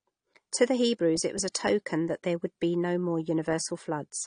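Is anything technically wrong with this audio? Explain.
Yes. Throughout the speech there is a dull, smeared quality with nothing above 9.8 kHz. Sibilants sound fizzy and sustained sounds warble. This is likely AAC compression. The encoder discards high frequencies and coarsely quantises the rest, which fits a low bitrate around 32 kbps.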